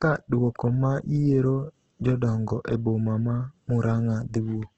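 Throughout, the speech sounds rough and grainy with nothing above 8.3 kHz, likely from heavy Opus compression: noisy texture, not the swirling of MP3.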